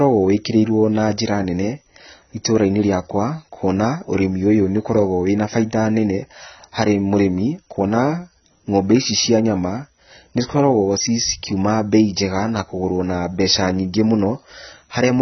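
From start to finish, the speech has lost its top end. Nothing is heard above about 6.1 kHz. Sibilants sound dull and fizzy, and steady vowels warble. The damage is heavy and constant. The likely cause is AAC compression, in the AAC-LC form, at a very low bitrate, one that fits roughly 16 kbps. Starved of bits, the encoder drops the upper bands entirely. It quantises the rest coarsely, which smears the detail.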